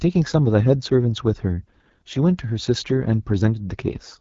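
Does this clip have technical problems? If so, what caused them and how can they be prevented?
Yes. The speech carries AMR wideband (HD Voice) codec damage from start to finish. Below 6.4 kHz the voice is rebuilt from a pulse-excited vocal tract model, and at this rate too few pulses are coded, so it comes out rough and raspy, which fits the 8.85 kbit/s mode. Above that, up to about 7 kHz, there is only synthetic hiss, with nothing above about 7.5 kHz. That band limit and noise fill distinguish it from narrowband AMR, which stops near 3.4 kHz. Prevent it by using AMR-WB at 12.65 kbit/s or higher.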